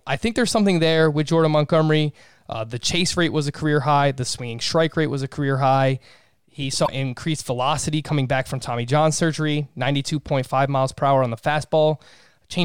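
From 6.83 to 6.89 s, just before "increased velocity coming back", damaged data in the compressed stream forces the decoder to resynchronise, leaving a brief disruption visible as a short broken patch in the spectrogram.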